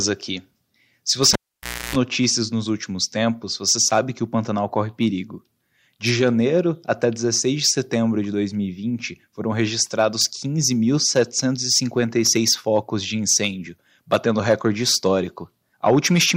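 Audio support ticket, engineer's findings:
Pop at 1.33 s, then near silence, with 60 Hz mains buzz lasting about 0.30 s inside the gap, and a second pop at 1.96 s as audio returns just before "notícias nos últimos tempos". Signal absent for about 0.58 s. Cable pulled and plugged in: live connector unplugged, buzz while only the tip touches, pop on reinsertion. Check input cable and jack seating.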